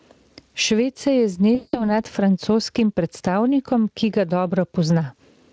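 Gain pumping runs through the whole clip. The level swings by roughly 15 dB. The likely cause is input gain set far too high, with a fast limiter pulling it back down.

From 1.55 to 1.98 s, just after "se je", comes VoIP packet loss concealed by the speech codec. About 180 ms went missing, which fits nine 20 ms frames. The decoder stretched the last sound into a buzzy tone or coloured noise that fades. The speech stays weak for a moment into "francoskim predstavnikom ki".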